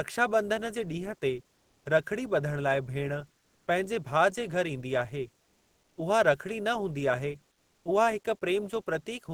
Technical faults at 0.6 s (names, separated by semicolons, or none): none